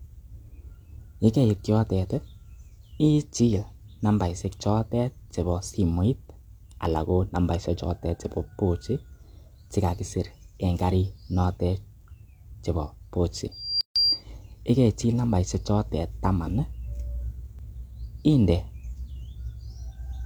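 Loudspeaker feedback squeal runs from 13.51 to 14.24 s. The microphone is picking up the loudspeaker it drives, and at 4.8 kHz the gain around that loop exceeds one, so that frequency feeds on itself. A thin, piercing tone swells over about a third of a second until it sits roughly 5 dB above the speech. It stays locked at one pitch and lasts until 14.24 s.

A gap at a join of encoded pieces opens from 13.81 to 13.96 s, in the middle of the squeal. Two separately encoded sections were joined without trimming, so the first one's padded final frame and the next one's encoder start-up delay both remain. Together they leave a 148 ms hole of silence. Its edges are smeared by the codec, and the sound carries on from where it stopped.

A repeated buffer occurs at 17.59 s. New audio did not reach the output device in time, so it replayed the previous 1.45 ms block once more, which fits a 64-sample buffer. 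The repeat is too short to register as a stutter. It is heard instead as a tiny click, caused by the hard joins where the duplicated block starts and ends within the speech.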